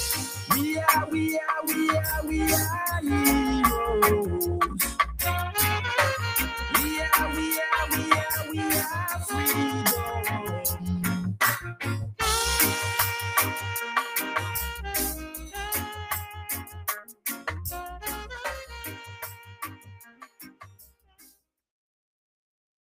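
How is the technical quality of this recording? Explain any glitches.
The technical quality is compromised by a speech-oriented noise suppressor running on material it wasn't designed for. Throughout the clip, this noise suppressor applied to music or sounds mistakes steady, sustained content for background noise and pulls it down, while onsets slip through. The level swings by a few decibels, giving a pumping, thinned character.

At seven points, sound is cut by the noise suppressor: 0.16–0.5 s (about 9 dB), 11.6–11.81 s (about 12 dB), 16.26–16.43 s (about 7 dB), 16.63–16.81 s (about 9 dB), 17.05–17.24 s (about 17 dB), 20.04–20.61 s (about 15 dB) and 20.93–21.42 s (about 16 dB). Each time, the suppressor classes the ongoing sound as noise and clamps it harder, so sustains and decays briefly sink or are cut short for 150 to 500 ms. The dips cluster around 16–17 s and 20–21 s.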